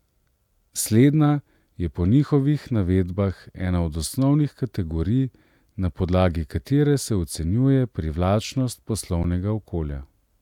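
At 9.23 s the speech stops for about 12 ms in an underrun with held sample. The output buffer ran dry for 512 samples, and the converter held its last value, flattening the waveform. Roughly 10 ms of audio went missing.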